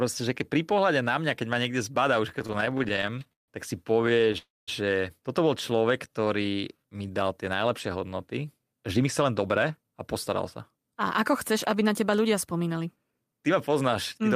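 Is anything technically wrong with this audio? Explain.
Yes, the speech has four kinds of network-related playback faults.

Repeated stalls (stutter) occur from 2.29 to 3.50 s, right after "ma niekde zbada už" and ending before "tak si". Packets kept arriving late, so the jitter buffer kept running dry. The receiver stretched the last sound across 24 gaps, the longest 153 ms, which fills about a third of that span. A lighter bout follows from 4.02 to 4.36 s, with eight brief gaps of 18 ms or less. Nothing is lost, but the speech drags and hiccups.

A call audio freeze runs from 4.38 to 4.69 s, just before "toto bol". The last sound is held and fades, then about 190 ms of silence follows before speech resumes where it stopped. This adds roughly 296 ms of delay. The likely cause is packets held up in transit, emptying the buffer.

A jitter buffer slow-down spans 5.70 to 7.24 s. The receiver repeated single pitch periods and pause fragments to rebuild its reserve, adding 179 ms. 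Speech plays at 89% speed with unchanged pitch, so sounds are drawn out.

A jitter buffer speed-up follows "tie najlepšie hodnoty" and runs from 8.97 to 14.29 s. The buffer held more audio than its target, so the receiver trimmed short pitch-period pieces, removing around 0.4 s in total. Speech runs at 107% speed with the same pitch and sounds hurried.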